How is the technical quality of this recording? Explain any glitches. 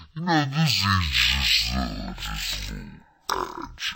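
The technical quality is poor. A stereo read as mono fault runs through the whole clip. The speech plays at half speed and a full octave low. Left and right samples were read in sequence as one channel, doubling the sample count. A fainter mirrored copy also sits high in the spectrum.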